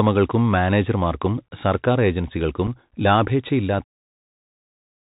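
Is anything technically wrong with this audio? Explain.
Yes. The speech has been through a Bluetooth CVSD headset codec for its whole length, and it has two brief gaps from unconcealed Bluetooth headset packet loss.

The CVSD coding runs from start to finish. The codec sends one bit per sample, meaning up or down, and adapts its step size. The narrow band and damage are consistent with a 64 kbps CVSD link. Nothing above 4 kHz survives, so the speech sounds boxed in. A granular hiss sits under it, sibilants come out scratchy, and loud high-frequency passages distort where the step size can't keep pace.

The first packet loss comes at 2.67 s, right after "മാനേജർമാർക്കും സർക്കാർ ഏജൻസികൾക്കും". The second is at 3.79 s. Each removes about 7.5 ms of audio, which fits a couple of lost headset packets that were replaced with silence or an idle pattern instead of being concealed. Each one is a short hole with hard edges that can click, and the level dips briefly as the CVSD decoder recovers.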